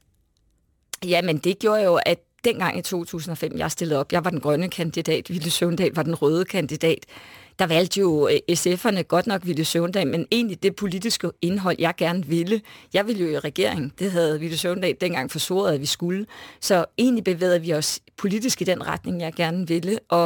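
Speech throughout carries sample clock jitter: the converter's timing wobbles by several microseconds, so samples land early or late. It's a gritty hiss riding the louder, brighter syllables, roughly 25 dB under the signal, and it disappears in the pauses.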